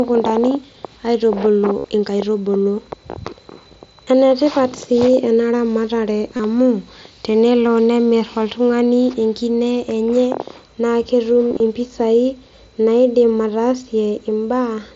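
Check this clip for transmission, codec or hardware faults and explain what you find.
Concealed Bluetooth headset packet loss occurs four times: 1.78–1.84 s (60 ms), 4.05 s, 6.36–6.40 s between "ena ramatare" and "amu tenelo", and 11.49–11.60 s after "enkine enye naa ketum". That last one is scattered over 120 ms, with runs up to 30 ms.

Each gap was filled by repeating the best-matching recent waveform stretch. The longer gaps give a buzzy held tone at full level, with a slight warble as real speech returns. On the waveform, identical cycles repeat at steady amplitude. On a spectrogram, the harmonics freeze into flat horizontal bands.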